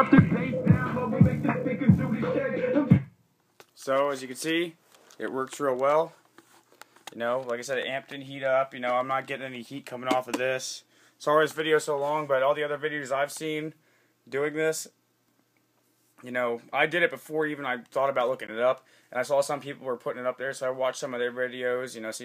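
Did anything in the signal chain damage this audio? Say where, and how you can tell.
Yes. A brief glitch at about -30 dBFS, 18.47 to 18.50 s, marks a corrupt frame decoded: the codec played a couple of bit-damaged frames, misplacing energy in frequency.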